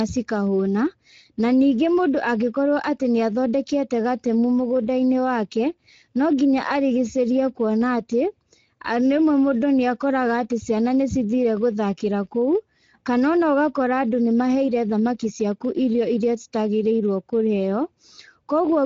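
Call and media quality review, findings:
Speex codec throughout, low-bitrate mode (consistent with about 16.8 kbps): too few excitation bits make the speech noisy and hoarse; top band only noise-like fill, nothing above 7.7 kHz.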